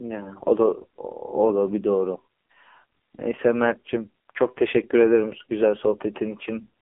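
AMR narrowband mobile codec throughout: speech is squeezed into a 300 Hz to 3.4 kHz band with nothing above 3.6 kHz, and sounds heavily buzzy and synthetic, consistent with a low mode near 5.9 kbps.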